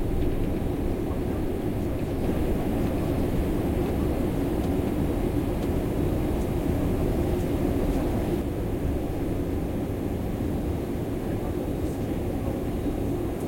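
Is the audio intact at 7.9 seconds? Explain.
No. At 7.9 seconds the clip is inside a doubled audio track that runs from 2.23 to 8.41 s. A second full-band copy of the sound plays about a second behind the original, at roughly the same level. It carries no decay or room colour, so it reads as a clean repeat rather than an echo. It cuts in and out abruptly at those edges. The likely cause is a slower second capture path or an edit that left two copies out of step.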